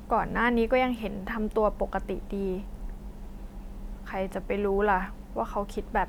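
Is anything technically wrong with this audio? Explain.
No, nothing technically wrong can be heard here.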